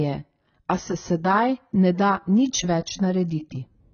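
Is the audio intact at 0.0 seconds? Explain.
No. From the very start, nothing sounds above 6.6 kHz and the speech carries smeared, watery coding artefacts, likely low-bitrate audio saved at a high bitrate, re-encoded without restoring the lost detail. Unlike a simple low-pass filter, the artefacts remain alongside the cut-off.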